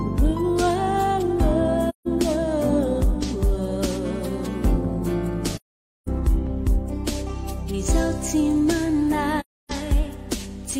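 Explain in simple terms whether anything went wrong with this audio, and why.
Something did go wrong: the sound drops out three times, at about 1.89 to 2.08 s, 5.56 to 6.09 s, and 9.40 to 9.71 s. That's AAC frame loss with muting. Chunks of the compressed stream went missing, and the player filled each gap with silence. Because AAC blends neighbouring chunks together, the audio fades down and back up rather than cutting hard, so you get soft holes. They last about 0.17, 0.51 and 0.30 s.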